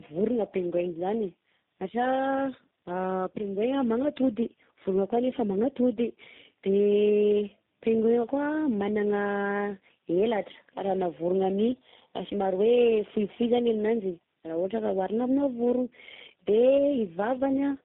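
Throughout, the speech has passed through several low-rate speech codecs in succession, a tandem speech coding fault, with each stage re-coding the previous one's degraded output. The compounded roughness and warble suggest three such codecs, ending in something like G.729A, and the sound is muffled, with nothing above 3.8 kHz.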